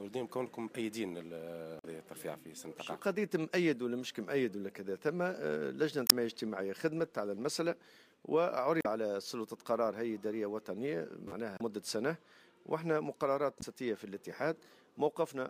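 Damaged data in the compressed stream produces short chirps, squawks, clicks or holes at 1.79–1.85, 6.04–6.12, 8.79–8.86, 11.56–11.61 and 13.58–13.63 s. Each time the decoder misreads corrupted frames and resyncs. The spectrogram shows brief smeared vertical bursts; the waveform shows abrupt discontinuities.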